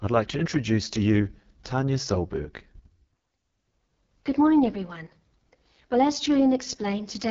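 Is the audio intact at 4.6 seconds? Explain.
No, not really. At 4.6 seconds, as everywhere else in the clip, the speech carries heavy AMR wideband (HD Voice) codec damage. It sounds rough and raspy, which points to the lowest AMR-WB rate, around 6.6 kbit/s. At that rate the codec rebuilds speech up to 6.4 kHz from a crude pulse-excited vocal tract model and fakes the band above with shaped noise, so there's nothing above about 7.3 kHz.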